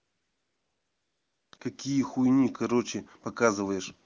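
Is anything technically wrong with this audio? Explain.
Yes. AMR comfort noise covers 0.00 to 1.51 s and 1.57 to 1.59 s. The phone stopped sending speech frames, so the receiver substituted smooth synthetic noise for the real background, switching abruptly at each boundary.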